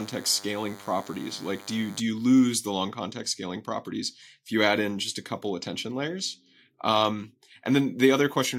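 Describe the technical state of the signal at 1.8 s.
At 1.8 s the signal carries DECT cordless phone buzz, which runs from 0.0 to 2.0 s and stops just before "you lose the long". A nearby DECT handset or base transmits a brief radio burst every 10 ms. The audio circuitry rectifies each burst, producing a thin, steady 100 Hz buzz rich in harmonics. It sits roughly 20 dB below the speech.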